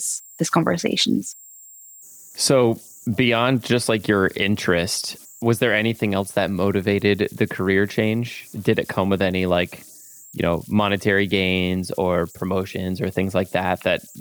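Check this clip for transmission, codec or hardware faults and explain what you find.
One fault runs through the whole recording: converter idle tones. A faint, high whistle around 7 kHz sits in the pauses and becomes grainy noise under quiet speech, about 28 dB below the signal. An undithered delta-sigma converter, given small input, locks into repeating bit cycles whose pitch tracks its offset.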